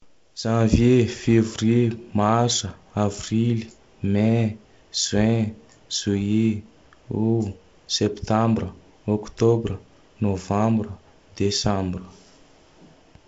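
Nothing here counts as a fault: the speech comes through G.722 wideband telephone coding at what sounds like 48 kbit/s, with the top end stopping at about 7.8 kHz and a light coding texture exactly as that path would leave it.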